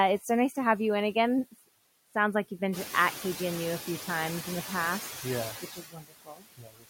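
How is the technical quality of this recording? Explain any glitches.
The recording has two related glitches, both from a noise suppressor working too hard.

Noise suppressor artifacts run through the whole clip. The suppressor pulls down whatever bands it judges to be steady noise, by about 20 dB, so the background ducks between phrases and comes back under them.

Speech is cut by the noise suppressor from 5.61 s to the end at 6.89 s. The suppressor mistakes some quieter parts of the speech for background and turns them down along with it, by as much as about 21 dB. Roughly 0.7 s in total gets hit, so those sounds come across swallowed and faint.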